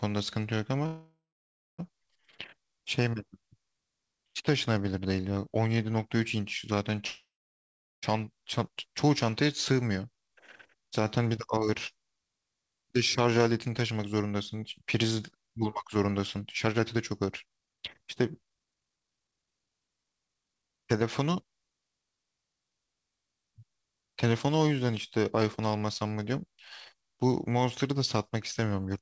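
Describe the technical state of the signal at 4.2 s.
At 4.2 s the signal is intact, with no fault present, the speech simply carrying the ordinary band-limited character of the G.722 call path, with nothing above 8 kHz.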